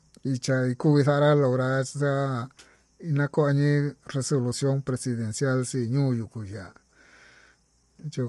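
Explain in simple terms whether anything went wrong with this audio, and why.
Yes: the speech sounds rough and grainy throughout, with nothing above 11.7 kHz, likely low-delay AAC compression. Unlike background hiss, the grit clings to the voice itself.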